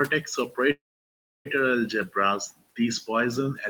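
Speech, with two faults close together near the start. Between 0.09 and 0.58 s, the noise suppressor cuts into the speech. About a tenth of a second of it is pulled down with the background, by about 13 dB at the deepest point. Those parts sound swallowed and faint. From 0.71 to 1.47 s comes a call audio freeze. The last sound trails off, then about 0.66 s of silence follows. The speech resumes where it stopped, with nothing lost, but it now runs about 0.74 s late. The likely cause is delayed packets emptying the jitter buffer. The room noise under the speech sits about 24 dB below it.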